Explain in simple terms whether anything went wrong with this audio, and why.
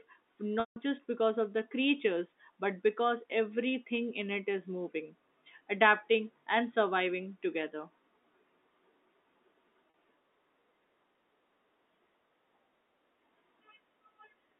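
Twice the speech briefly sticks. From 0.6 to 0.76 s it turns into a held, buzzy tone that fades toward silence before picking up at "just because of the". At 9.9 to 9.94 s there is a much shorter buzzy catch. This is packet loss with pitch repetition: chunks of the call never arrived, so the phone repeated the last bit of voice to fill each gap. The telephone-quality sound, limited to a narrow band, is simply the line's G.711 telephone coding.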